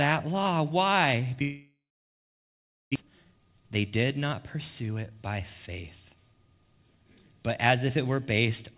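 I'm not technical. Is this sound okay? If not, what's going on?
No, there are two problems. From 1.42 to 2.98 s the speech gives way to a short fading buzz and then silence, and about a second of it never comes back. That's most likely a long network dropout, where the connection stalled and that audio was lost.

Right after, from 3.01 to 5.40 s, the speech sounds rushed, about 16% faster but at the same pitch. That's a jitter buffer speed-up: the receiver is trimming tiny slivers, roughly 0.4 s in total, to catch up on the delay the stall caused. Throughout, the sound is dull and phone-like, with nothing above 4 kHz, because it went through a standard phone-style call codec.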